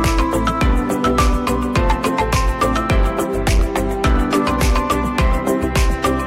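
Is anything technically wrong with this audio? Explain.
Yes, there's hard clipping running through the whole clip. The signal was pushed roughly 8 dB past what some stage in the chain could handle, so its peaks get sliced off flat, with something like 7 percent of the waveform sitting pinned at the ceiling. Those squared-off tops throw energy into high harmonics that weren't in the original, which is why every louder moment comes with a harsh, gritty fuzz instead of clean peaks.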